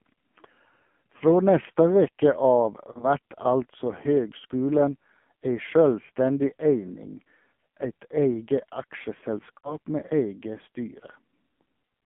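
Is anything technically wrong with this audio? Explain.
Yes. Throughout, the speech sounds thin, buzzy and synthetic, confined to roughly 150 Hz to 3.4 kHz, with heavy damage from the AMR narrowband mobile codec. Its 8 kHz vocal-tract model, starved of bits, approximates the voice crudely, a sound that fits a low mode around 5.9 kbps.

There are also lost AMR speech frames. At 1.18 to 1.23 s and 2.92 to 3.07 s the sound briefly dips and warbles. At 9.58 to 9.76 s it smears, fades, then returns rough. In each case the decoder replayed the last good settings with falling gain, suggesting one lost frame in each of the first two and about three in the last.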